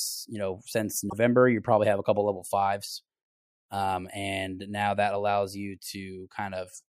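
At 1.06 s, right after "you know since" and before "you probably have a", a brief glitch of about 70 ms cuts through the speech. This is damaged data in a compressed stream: corrupted bytes make the decoder misread the frames there and lose sync until it finds a valid frame header again.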